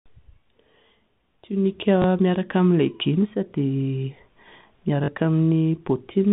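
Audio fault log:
2.02 to 2.04 s, packet loss with last packet repeated: a 20 ms gap is patched by replaying the previous chunk once, giving a brief glitchy hiccup.
5.04 to 5.08 s, packet loss with last packet repeated: a longer 40 ms hole, which fits two 20 ms packets going missing. The repeats give a short robotic stutter with a 50 Hz buzz or flutter, heard through the narrow telephone band of the G.711 path.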